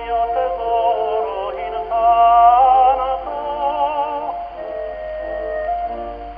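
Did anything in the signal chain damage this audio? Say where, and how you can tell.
No, nothing in the signal chain damaged this audio that I can hear.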